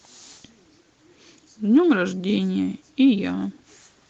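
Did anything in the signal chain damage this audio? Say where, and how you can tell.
No, nothing in the signal chain stood out as damaging this speech on listening, and the call path's band-limited, compressed sound is what an Opus link at about 24 kbps with an 8 kHz audio bandwidth would normally give.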